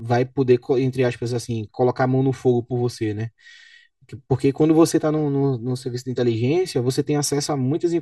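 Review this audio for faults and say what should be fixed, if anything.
The speech sounds hollow and phasey for the whole clip, with fixed notches starting around 200 Hz. This is channel delay (comb filtering): one channel arrives about 3 ms late, and folding both to mono cancels their shared content at evenly spaced frequencies. To prevent it, time-align the channels before any mono summing, or use a single channel.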